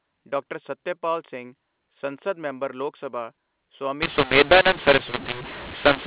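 Telephone-band speech, with nothing above 4 kHz, turns harsh and gritty at 4.02 s and stays distorted to the end, with pauses filling with hiss. This is mu-law and A-law mixed up: A-law-coded audio decoded as mu-law scrambles levels and lifts the quietest samples above silence.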